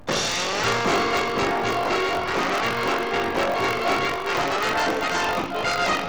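Buffer tearing runs through the whole clip: a rattling, robotic buzz at about 47 Hz, which fits a 1024-sample buffer. The writer and reader have slipped, so roughly a fifth of each period replays audio about 40 ms old, with hard joins.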